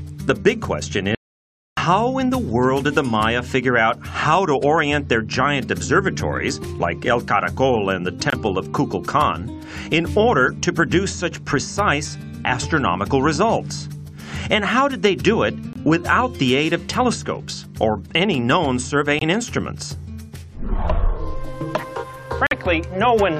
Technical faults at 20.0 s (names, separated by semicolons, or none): none